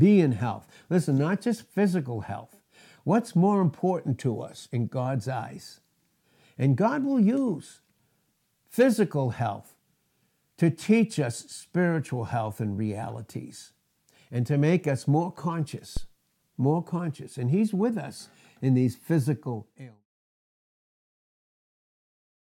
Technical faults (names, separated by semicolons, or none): phantom power thump